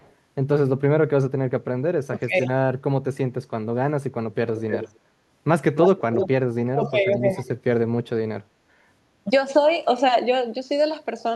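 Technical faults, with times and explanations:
0.0–0.12 s, 4.56–4.99 s and 5.75–6.28 s, echo leak: the far end's echo canceller likely failed to remove all of its loudspeaker pickup, so a delayed copy of the speech returns 330 ms late at the start, very faint, then 303 ms late and nearly as loud as the speech.
2.01–2.35 s, 6.69–7.21 s and 7.43–7.48 s, speech suppressed in double talk: with both sides talking at once, the echo canceller likely confused the talker with loudspeaker echo and turned both down. The speech drops sharply, by around 30 dB in the first two spans and by a milder 10 dB or so in the brief last one.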